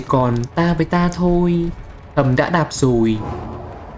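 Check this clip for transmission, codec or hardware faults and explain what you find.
Nothing heard here points to any fault at all.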